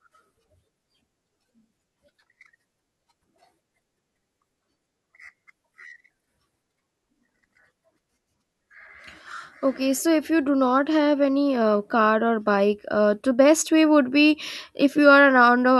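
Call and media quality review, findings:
Nothing to flag on this speech recording; no faults turned up anywhere in it.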